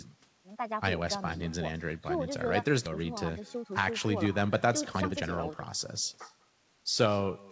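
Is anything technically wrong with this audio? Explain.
Yes, there are three kinds of fault.

Echo with no canceller runs through the whole clip. The far end's loudspeaker feeds its microphone and nothing subtracts that return. Every phrase is trailed about a fifth of a second later by a thin copy, roughly 24 dB below the direct sound.

A skip ahead occurs at 2.86 s. A stretch of audio was dropped while later audio was already waiting, and playback jumps forward with no gap, dropping around a second of material. The two sides of the cut are butted together abruptly.

Jitter buffer speed-up follows from 2.99 to 5.51 s at 117% speed, and again from 6.13 to 7.14 s at 110%. The buffer held excess audio and trimmed repeated pitch-period slices, around 0.4 s and 0.1 s in total. Speech rushes at unchanged pitch.

The band stops at 8 kHz, which fits a G.722 call path.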